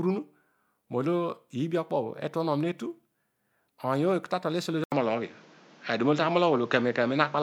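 At 4.84 s the input most likely switched to a poorer device, with the recording system moving to a lesser input for the rest of the clip. An 80 ms silence marks the switch. From there the speech loses everything above 7.6 kHz and turns duller and boxier, its level shifts by about 5 dB, and a new background noise appears about 30 dB below the speech.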